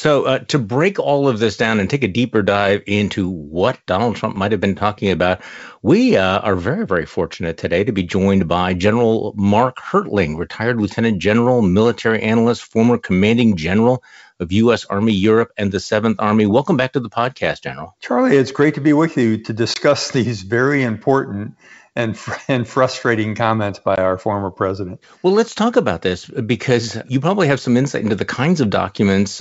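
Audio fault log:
4.36 s, block of digital silence: a tiny tick just before "might have been talking", where the sound drops to zero for about 3.7 ms and jumps straight back. With no fade on either side, the two hard edges merge into one click rather than an audible gap. A block of samples reached the output as zeros, most likely because the output buffer was not filled in time, leaving a brief hole in the stream.
19.74 to 19.77 s, packet loss on an ADPCM call: after "be with you to" the sound breaks off for 20 ms with a hard edge, then comes back on "these very important and" with a moment of roughness before settling. A lost packet, roughly one, was filled with silence. The decoder's adaptive predictor and step size then no longer matched the sender's, so the restart is distorted until they realign. The call's G.722 wideband coding carries content up to about 7 kHz, and its trace is faint at most.
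23.96 to 23.98 s, block of digital silence: between "and frustrating comments" and "our former president" there is a short dropout of about 17 ms. The signal cuts instantly to silence and back. This longer block is heard as a small hole rather than a single tick, likely with the same cause of a buffer left empty and sent out as silence.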